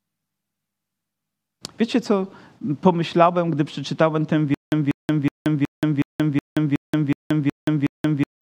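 From 4.54 s to the end, after "pomyślałem gdy przeczytałem ten", the stream likely stalled and kept replaying its last fragment: a stutter with silent gaps. A 192 ms burst recurs ten times every 369 ms, with 177 ms of digital silence between; the rest is lost.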